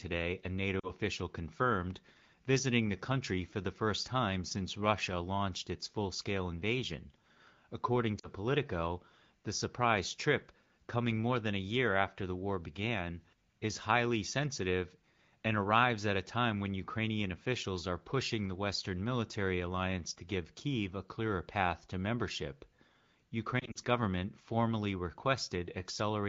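Lost AMR speech frames, damaged over the radio link, force the wideband decoder to conceal gaps in this speech by repeating its last good settings at falling gain. Each gap drops to near silence: about 40 ms at 0.79–0.92 s and 8.19–8.27 s, and scattered short dropouts at 23.59–23.78 s, through light, clear-sounding HD Voice coding.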